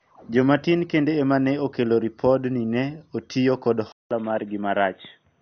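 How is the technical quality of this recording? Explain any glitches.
The technical quality is poor, with two audible problems.

Throughout, the speech is dull and gurgling, with granular distortion. This is likely MP2 compression at a rate that fits about 48 kbps, where starved upper sub-bands are shut off. A spectrogram shows nothing above 6.5 kHz, with blotchy, flickering bands below.

At 3.92 s there is a 187 ms gap, and the sound then turns boxy, a little quieter, and carries a faint new hiss far below the speech. The likely cause is the input switching to a poorer device. On the spectrogram, content stops at 3.8 kHz, and the waveform shows the gap and a smaller envelope.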